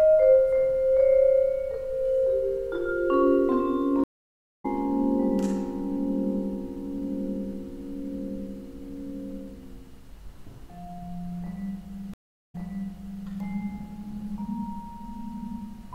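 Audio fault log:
4.04–4.66 s: stream reconnect. The audio goes silent for about 0.55 s and resumes roughly half a second further on, skipping material, because the player dropped the connection and restarted its decoder mid-stream.
12.14–13.27 s: stream reconnect. A 0.35 s silence, then the audio picks up 0.78 s earlier and replays that stretch, because the server resent a buffered burst to the freshly restarted decoder.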